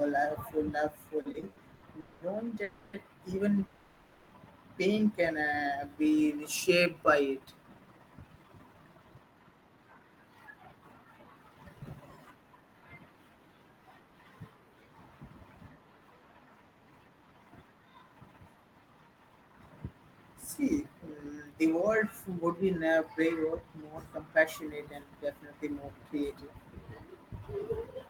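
Speech that is interrupted early by a repeated stalls (stutter) pattern from 1.21 to 1.85 s: five brief gaps, the longest 80 ms, are bridged by continuing the last sound, about 250 ms in all or 39% of that span. Packets kept arriving late and the jitter buffer kept running dry. Nothing is lost, but the speech drags and hiccups. Next come three call audio freezes: 2.00 to 2.24 s (210 ms), 2.63 to 2.96 s (300 ms), and 3.65 to 4.34 s (660 ms), the last ending just before "pain can". Unlike the stutter, each is one sustained hold, a continued sound fading into buzz or hiss rather than silence. Each freeze pushes the delay later by its full length, which points to packets likely held up in transit while the buffer emptied. Right after "pain can", a jitter buffer slow-down runs from 5.59 to 6.95 s at 91% speed, adding 134 ms by repeating single pitch periods. The pitch stays put, which tells it apart from a slowed tape, with stretched sounds. 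Jitter buffer speed-up then trims pitch periods to shed excess delay: 8.35 to 15.36 s at 109%, removing roughly 0.7 s, and after "would be now" from 23.44 to 28.08 s at 103%, removing about 0.15 s. The pitch stays the same while the first run's delivery sounds hurried.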